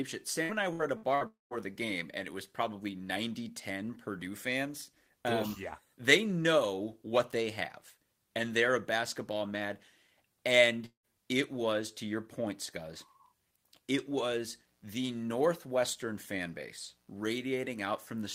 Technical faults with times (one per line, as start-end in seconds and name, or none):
0.43-1.24 repeated packet loss (robotic sound)
1.27-1.54 long network dropout
10.86-11.07 long network dropout
14.34-18.35 mains buzz